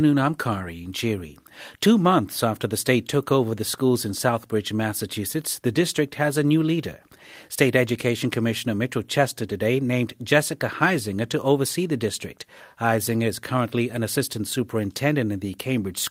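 No technical faults are audible anywhere in this speech recording.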